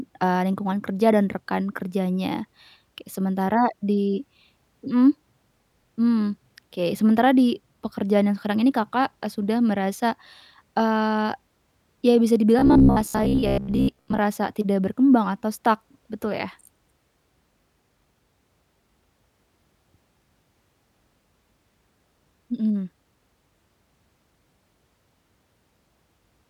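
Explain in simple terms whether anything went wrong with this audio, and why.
Something does go wrong, from about 12.59 to 14.19 s. The speech suddenly turns into a stiff, metallic buzz that still roughly follows what's being said. That's robotic sound from repeated short buffers. The likely cause is new audio arriving too slowly, so the playback keeps looping a tiny slice, roughly 15 ms long, to fill the gaps, and about half the sound gets replayed instead of played fresh. Those loops stamp a fixed hum of about 66.8 Hz over everything.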